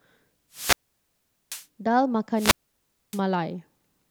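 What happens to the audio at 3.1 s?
At 3.1 s the speech is inside a wireless microphone squelch dropout running from 2.35 to 3.21 s. The FM radio link fades, hiss rises, and the receiver's squelch mutes the output for about 0.62 s. A spectrogram shows a broadband static smear, then a near-empty gap before the speech energy returns.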